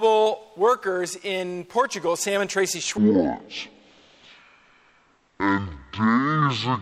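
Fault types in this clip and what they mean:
stereo read as mono: from 2.98 s, interleaved left-right samples play as one channel, giving exactly half speed, an octave low, plus a faint mirrored image unlike plain slowdown.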